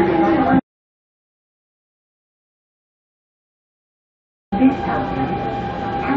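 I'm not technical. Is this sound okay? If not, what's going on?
No. The input was most likely lost for a stretch, so the recording kept writing pure silence: an audio dropout to silence. The sound cuts out at 0.60 s and returns at 4.52 s, leaving nearly four seconds of dead quiet with nothing in it.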